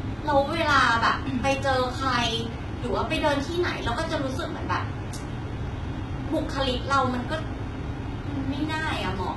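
Throughout the speech, heavy HE-AAC compression is the likely cause. Treble above 11.8 kHz is missing, and rebuilt upper bands make sibilants gritty and metallic, fitting roughly 16 kbps.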